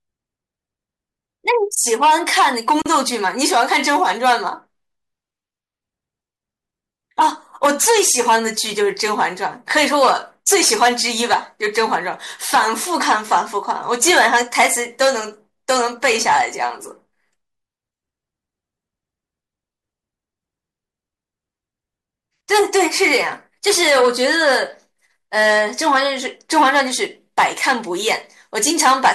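At 2.82 s there's a gap at a join of encoded pieces, roughly 40 ms of silence with smeared edges, then the speech picks up right where it left off.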